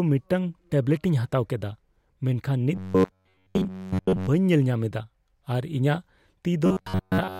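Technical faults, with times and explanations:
2.75–4.28 s (just after "ᱢᱮᱱᱠᱷᱟᱱ ᱱᱤᱛ") and 6.66–7.39 s, robotic sound from repeated short buffers: speech becomes a rigid metallic buzz at 93.8 Hz, likely from repeating roughly 10.7 ms chunks. The spectrogram shows even harmonic stripes, and the waveform shows identical repeating cycles.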